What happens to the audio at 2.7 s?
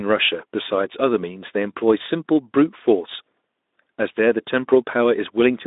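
Nothing goes wrong at 2.7 s: the speech continues intact through that moment, carried on the narrow Speex phone-band path with its usual light coding and nothing above about 3.8 kHz.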